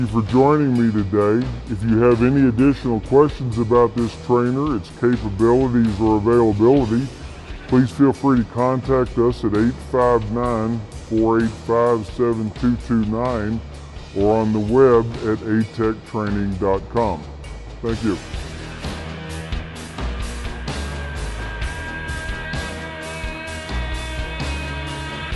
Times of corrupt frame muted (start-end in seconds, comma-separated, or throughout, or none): none